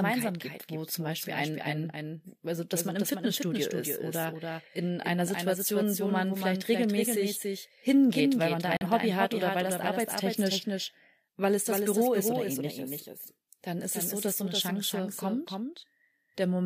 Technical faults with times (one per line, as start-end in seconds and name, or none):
0.00-16.65 doubled audio track
8.77-8.87 digital broadcast dropout